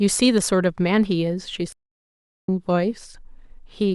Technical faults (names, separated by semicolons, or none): playback stall